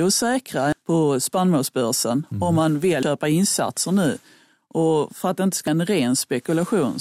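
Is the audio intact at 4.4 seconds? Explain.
Yes, at 4.4 seconds the speech is intact, with no dropout, click, distortion or other audible fault at that moment.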